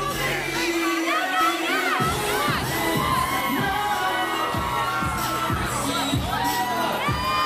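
At 1.41 s a doubled audio track kicks in and runs until 3.41 s. A second full-band copy of the sound trails the original by roughly 0.7 s, sitting about 5 dB quieter. It's a dry, exact repeat with no decay or room colour, and it switches on and off abruptly at both ends. The likely cause is the same signal reaching the mix twice, once through a slower path.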